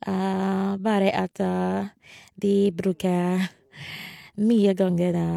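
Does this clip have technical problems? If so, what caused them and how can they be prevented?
No, nothing stood out as a technical problem on listening to this speech clip, so there is no cause to trace and nothing to prevent.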